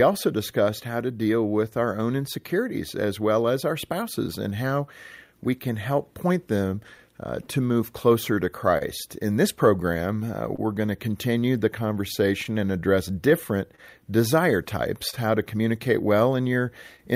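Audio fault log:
throughout: clock drift between sender and receiver. The sender's clock runs about 2% slow against the receiver's, so the jitter buffer keeps draining and the receiver must stretch the stream to avoid running dry, leaving small timing hiccups at uneven intervals across the speech.
0.51 to 16.42 s: repeated timing corrections. To keep pace with the slow sender, the receiver repeats short slices of audio, adding roughly 200 ms in total and slowing delivery to about 99% speed. Each insertion is tiny, heard as faint stutters or a slightly unsteady tempo.
6.98 to 10.6 s: scattered short gaps. About five packets arrived late or went missing, the longest near 30 ms, and the receiver bridged each hole by extending the preceding sound, roughly 70 ms in all. The speech stays clear apart from brief ticks or smeared moments.
12.44 to 17.0 s: scattered short gaps. Another five or so lost or late packets, none longer than about 30 ms, were filled by continuing the last sound, around 100 ms concealed overall. 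They come through as scattered small hiccups and slight smears in the speech.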